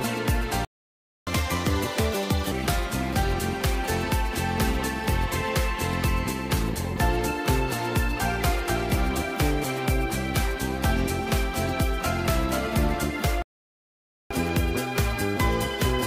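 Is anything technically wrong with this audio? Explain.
Yes, there are two playback stalls, each followed by a stretch of catch-up at higher speed.

The first playback stall runs from 0.65 to 1.27 s, about 0.62 s of silence. The second runs from 13.42 to 14.31 s, about 0.88 s. The audio halts in mid-flow and then goes on again. The likely cause is that the player either ran short of data or had its processing thread blocked, so nothing reached the output until it recovered. A packet dropout would leave brief clicks or gaps; these stalls are long, clean silences.

Catch-up at higher speed follows each stall immediately. From 1.27 to 2.51 s the player resamples its backlog at 1.5 times normal speed, raising pitch by about seven semitones, then returns to normal. From 14.31 s to the end of the clip it plays at 1.15 times speed, about two semitones higher. A wrong sample rate would alter the whole clip. 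Here speed and pitch rise together only in these post-stall windows, which is what marks them as catch-up.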